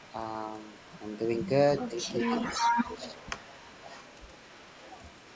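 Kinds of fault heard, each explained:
Echo leak: 0.0–0.14, 0.47–1.48 and 1.84–5.35 s, a copy trails 407 ms late, faint, then near full level; likely uncancelled loudspeaker pickup sent back.
Speech suppressed in double talk: 1.8–2.05 and 2.59–2.86 s, the voice dips about 10 dB, then about 5 dB, likely an echo canceller ducking overlapping talk.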